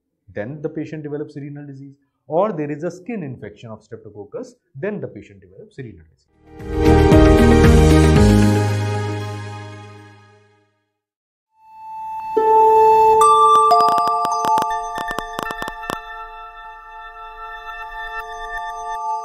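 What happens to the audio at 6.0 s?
Nothing goes wrong at 6.0 s; the audio plays through that moment intact, with no dropout, click, distortion or other fault.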